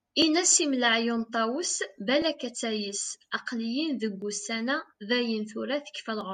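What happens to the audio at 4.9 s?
Periodic USB or driver dropouts run from 0.22 s to 6.21 s, so 4.9 s falls within them. Every 2.0 s something blocks the audio path and about a millisecond of speech is skipped, leaving an evenly spaced tick in the voice.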